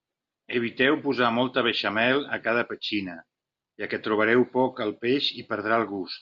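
Listening to this speech recording, nothing stood out as a technical problem.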